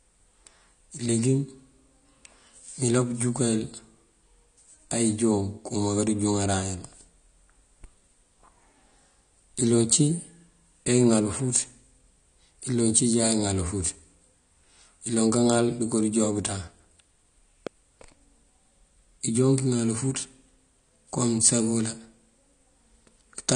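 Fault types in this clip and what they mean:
AAC compression: The speech sounds dull and smeared, with nothing above 9.9 kHz. This plainly audible damage is likely low-bitrate AAC-LC coding, around 32 kbps.
Loud pop: One sharp pop at about 17.67 s stands roughly 10 dB above the speech. It is likely a voltage pulse from a switch or glitch.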